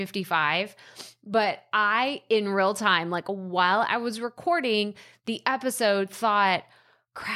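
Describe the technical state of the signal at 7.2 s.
At 7.2 s the speech signal is intact, with no audible fault at that moment.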